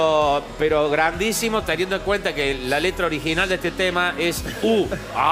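No technical faults can be heard anywhere in this clip.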